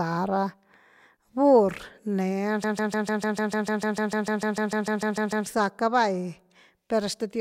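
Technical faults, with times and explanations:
2.64–5.46 s, broken-record loop: a 0.15 s fragment of the speech repeats exactly, back to back, 19 times. The likely cause is a stalled player or stream resending its last buffered piece. The speech that belonged in those seconds is lost.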